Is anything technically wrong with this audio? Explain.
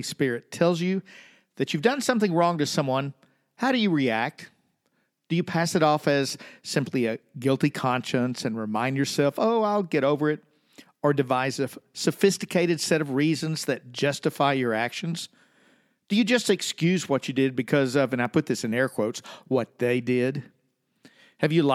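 Yes. Two sharp, isolated clicks cut through the speech, one at 6.30 s between "you pass it off" and "simply a guilty conscience", and one at 18.25 s between "because of and I" and "put this in air". Each is a single tick, too brief to hide any sound. The likely cause is dropped samples: a handful of samples, roughly a tenth of a millisecond, go missing, so the waveform steps abruptly to a later value and leaves a thin broadband line in the spectrum.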